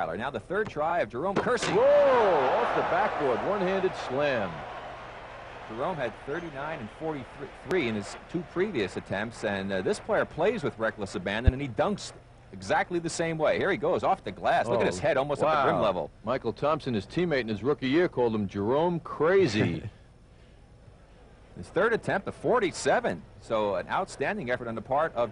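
A voltage spike, likely from a plug, switch or static discharge, adds two loud pops, at 7.71 to 7.74 s and 11.47 to 11.51 s, about 15 dB and 20 dB above the sound, which continues underneath.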